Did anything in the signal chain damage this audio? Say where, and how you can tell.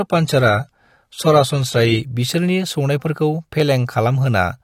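Yes. The damage is at the network streaming stage, an adaptive stream starting at a low bitrate. From 0.0 to 2.0 s the speech is dull, with nothing above 15 kHz and stronger codec smearing. At 2.0 s the treble and clarity return abruptly, with no dropout, which fits the player switching from roughly a 32 kbit/s AAC version to a 96 kbit/s one. That seamless one-way step up distinguishes it from packet loss or a failing connection.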